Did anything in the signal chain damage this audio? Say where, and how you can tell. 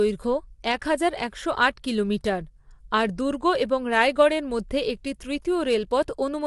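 Yes. The damage sits at the codec stage and runs through the whole clip. The speech sounds rough and grainy. Noise fills the gaps between the pitch harmonics, and nothing remains above 11.6 kHz. That points to low-delay AAC compression, likely AAC-ELD at a rate that fits around 32 kbps. Its short frames, about 500 frequency lines each, cannot resolve the harmonics finely. The scarce bits smear them, and the top band is cut away.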